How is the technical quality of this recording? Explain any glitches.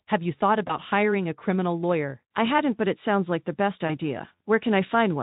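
The speech has two brief glitches from VoIP packet loss concealed by the speech codec. The Speex coding underneath adds only light hoarseness.

At 0.67 to 0.75 s, right after "you thought", one packet drops out. The decoder extrapolates from the last pitch and filter, fading a brief buzzy tone or coloured noise. The gap fits a single lost 20 ms frame. Recovery takes a few tens of milliseconds.

The same happens at 3.87 to 3.96 s, after "sounds like the best". There is another short, fading smear before the speech steadies.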